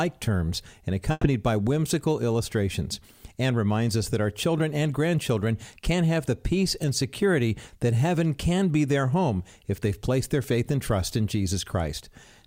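A burst of packet loss runs from 1.11 to 1.25 s. Several consecutive packets never arrived in time, so the receiver stretched the last sound for about 120 ms, fading it out, then 10 ms of silence, before resuming with 120 ms of audio gone.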